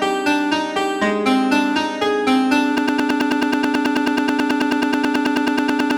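At 2.78 s the audio locks into a broken-record loop. A fragment of about 108 ms repeats exactly, back to back, about 30 times, and runs to the end of the clip. The likely cause is a player, encoder or stream that stalled and kept resending the last fragment it held, so the audio that belonged in those seconds is gone. Unlike a stutter or echo, each repeat is identical and the sound never moves forward.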